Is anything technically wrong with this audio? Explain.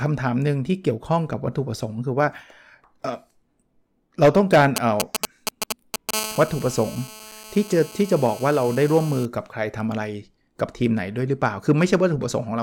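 Yes, a nearby 2G phone is interfering with this speech recording in two distinct ways.

From 4.76 to 6.11 s there are GSM signalling bursts: a galloping dit-dit-dit of short 217 Hz buzzes, roughly as loud as the speech. The phone is exchanging short radio bursts with the network, and the audio circuitry rectifies each burst into an audible pulse. On a spectrogram this looks like clustered vertical stripes, with a 217 Hz harmonic comb inside each group. The waveform shows clumps of sharp spikes.

From 6.14 to 9.26 s a GSM phone buzz takes over, a hard, raspy tone at about 15 dB below the speech. The phone is now in a call, transmitting continuously at 217 bursts per second, and each rectified pulse becomes part of a steady buzz unrelated to the speech. A spectrogram shows evenly spaced horizontal lines at 217 Hz and its many multiples, running unbroken through the speech. The waveform carries a fine, regular pulse-like ripple at that rate.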